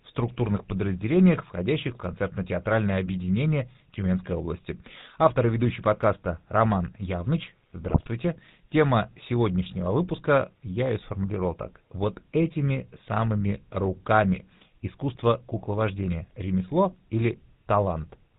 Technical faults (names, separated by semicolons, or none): GSM full-rate codec; GSM bit errors